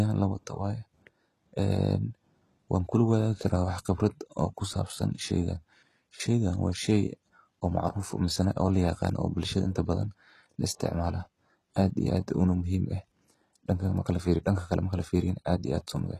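Likely HE-AAC compression at a low bitrate, around 16 kbps, rebuilds the treble from copied lower bands, so sibilants in this speech turn gritty and metallic throughout, with nothing above 12.4 kHz.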